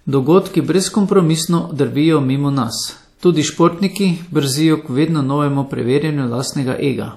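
Throughout the speech there is plainly audible damage from lossy transform coding, likely WMA compression. Nothing sounds above 15.4 kHz. Quantisation noise smears across long blocks, so consonants ring and a washy hiss breathes with the voice. The damage fits a bitrate near 48 kbps.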